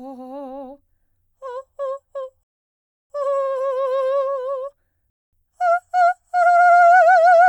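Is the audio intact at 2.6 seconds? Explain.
No. At 2.6 s the music sits inside a rebuffering stall running from 2.43 to 3.10 s. The player exhausted its downloaded audio and halted, leaving silence, then resumed exactly where it stopped. Nothing is lost, but 666 ms of dead time is inserted.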